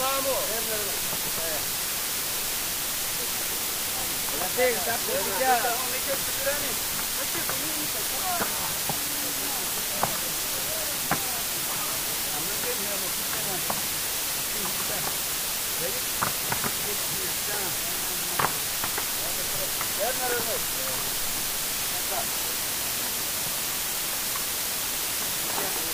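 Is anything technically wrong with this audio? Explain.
Yes. Throughout the clip there is low bit depth with dither: the audio is held to only 3 bits, and dither randomises the rounding error into steady white noise. The result is an even, constant hiss about 10 dB louder than the sound itself. Undithered truncation would instead cause gritty distortion that follows the signal.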